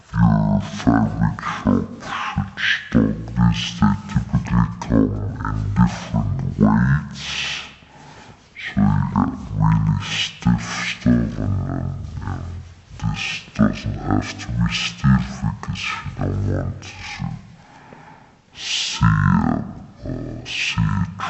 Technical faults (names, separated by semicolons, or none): stereo read as mono